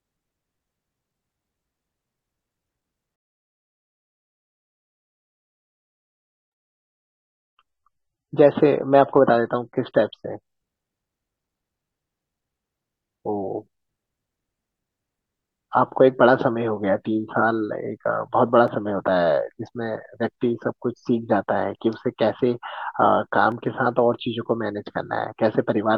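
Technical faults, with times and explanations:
4.43 to 10.43 s, adaptive stream at a lower bitrate: the speech abruptly gains codec artefacts without any gap, consistent with a fall from roughly 96 to 24 kbit/s, then snaps back.
18.68 s and 23.52 s, dropped samples: each is a single sharp click with no audible gap, likely a fraction of a millisecond missing so the waveform jumps.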